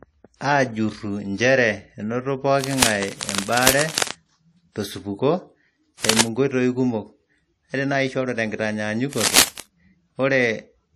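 Right from the start the speech carries a blend of smeared, swirly codec artefacts layered on each other, which points to transcoding between lossy codecs, likely a low-bitrate WMA pass re-encoded as AAC-LC at around 48 kbit/s. The second encoder wastes bits on the first one's damage, and the duller top end of the lowest cut-off in the chain stays.

From 2.61 to 4.12 s there's cable scratch noise, a rough rustling burst a little below the speech level, likely from a worn cable or connector being moved. A short, harsher crackle louder than the speech hits 6.04 to 6.21 s, and another at about speech level runs 9.12 to 9.60 s.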